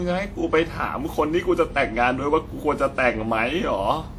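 Across the whole speech clip the sound is swirly, smeared and hollow, with blurred onsets and nothing above about 20 kHz. That points to generation loss, likely from being re-encoded around seven times with a WMA-type codec near 96 kbit/s, each pass adding fresh quantisation damage.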